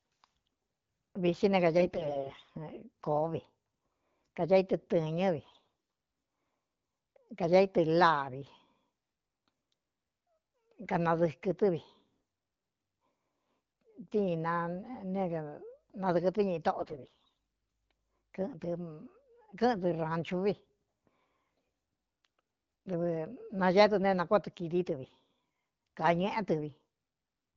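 AMR bit errors hit at 1.77 to 2.50 s, 5.41 to 5.67 s and 16.73 to 17.37 s, the last burst heavier. Corrupted low-priority frame bits misplace excitation pulses and skew fine pitch, gain and spectral values, so the speech keeps its pitch and level but turns hoarse, scratchy and gargly.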